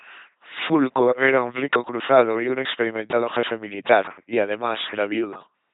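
Speech heard through an LPC-10 vocoder, throughout. At 2.4 kbit/s it sounds buzzing and robotic, with heavy damage. Nothing is heard above about 3.9 kHz.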